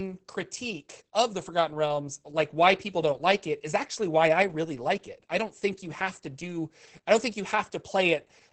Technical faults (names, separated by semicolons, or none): Opus voice compression